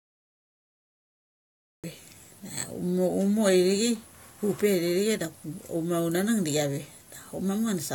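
For the first 1.84 s there is nothing but dead digital silence, and then the speech bursts in at 1.84 s already in the middle of a sound, with no natural attack or fade-in leading up to it. This is a cut-off start: capture or streaming began late, so the beginning of the utterance was never recorded and the audio jumps straight from silence into ongoing speech.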